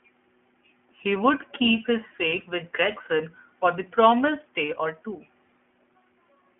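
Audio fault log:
Throughout, iLBC codec: the speech sits in a narrow telephone band, roughly 250 Hz up to 3.4 kHz, so there's no top end or deep low end. The roughness and slightly synthetic, buzzy edge are plainly audible. That comes from each short frame's excitation being coded on its own with no help from the last one. The graininess fits 20 ms frames at the 15.2 kbps rate.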